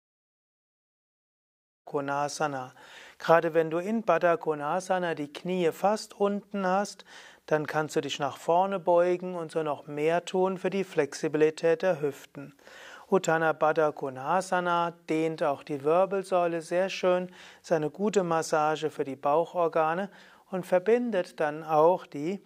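No technical faults can be heard in this audio. The level fades in smoothly at the start, with no click or hard edge, and reaches full level by about 1.9 s.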